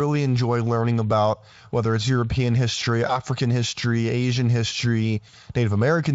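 At 3.07 s the speech briefly turns buzzy and smeared until about 3.20 s, and again from 5.29 to 5.34 s. This is VoIP packet loss concealed by the speech codec. The decoder, missing data, kept replaying its last pitch and filter at falling gain, which fits a single 20 ms frame lost the first time and about 40 ms the second. Unlike a plain dropout, there is no silent gap. The sound stretches into a fading tone, and the first event stays distorted past the loss itself, while the Speex coding around it stays clean.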